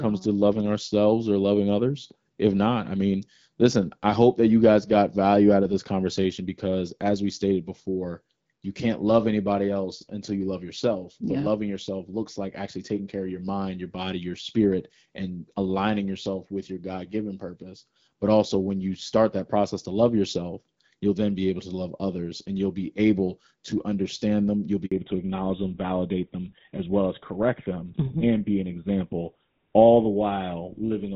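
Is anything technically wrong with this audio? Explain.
Yes, there are two related faults near the end of this speech clip.

At 24.86 s the sound drops out completely for 60 ms, fading within a few tens of milliseconds. This is a handover gap: the call switched networks, and no speech frames arrived until the new link was up, so that stretch is lost.

From 24.92 s to the end, the speech turns duller and rougher, with nothing above 4 kHz. This is a fallback to narrowband: after the handover the call left the AMR wideband (HD Voice) codec, which carried the earlier speech with light coding roughness consistent with about 12.65 kbit/s, for an older narrowband codec, which fits GSM full rate.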